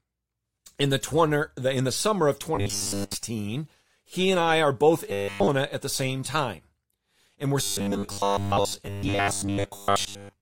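From 2.55 to 3.14 s, 5.10 to 5.49 s, and 7.62 s to the end, the voice turns into a rigid metallic buzz at 100 Hz: robotic sound from repeated short buffers, likely a 10 ms chunk replayed in place of late audio, filling most of each span and all of the middle one.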